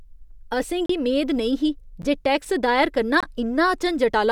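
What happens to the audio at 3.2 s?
A block of digital silence runs from 3.20 to 3.23 s, just after "जे टैक्स दायर करना": about 23 ms of zeros, which fits a 1024-sample buffer left unfilled, heard as a short hole.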